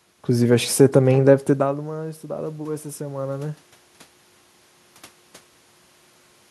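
From 1.46 to 3.65 s, automatic gain rising occurs. The talker moves away near 1.5 s, the input drops about 16 dB, and the gain climbs about 5 dB, swelling voice and room noise together.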